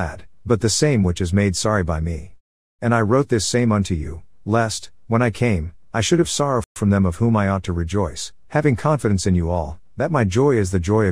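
At 6.64 s the sound just drops out for about 120 ms and comes back at 6.76 s. That's a playback stall: the player most likely ran short of data or had its thread held up, so the output sat silent until it caught up.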